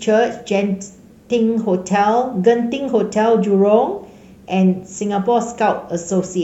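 From start to finish the speech carries a grainy, rough edge that rises and falls with the sound itself, sitting roughly 50 dB below it. The likely cause is low bit depth without dither: the samples appear to have been rounded to about 10 bits, so the error tracks the waveform. Unlike steady hiss, it turns gritty or sputtery on quiet syllable tails and decays.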